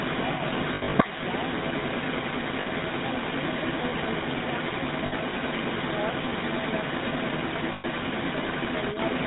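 Coding with the GSM full-rate codec runs through the whole recording, consistent with a 13 kbps mobile link. The codec rebuilds the sound from a coarse vocal-tract model and sparse pulse excitation and discards everything above 4 kHz, so the speech sounds dull, buzzy and gravelly.

An echo leak is also present from start to finish. A loudspeaker-side echo canceller likely failed to suppress what its microphone picked up, sending a copy back about 0.38 s late. That echo sits at roughly the level of the direct speech or above it, doubling the voice that side played with a delayed copy.

Lost GSM frames first appear from 0.74 to 0.95 s. About 160 ms is missing across a 200 ms stretch, with the longest gap around 70 ms. The decoder repeats the last good frame, so the sound hangs as a rough metallic ring.

The same concealment recurs at 2.60 to 2.67 s and 5.06 to 5.13 s, each 60 ms long, then at 7.72 to 7.85 s, where 120 ms goes missing. 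Each gap is bridged by a brief held, tinny buzz instead of the real sound.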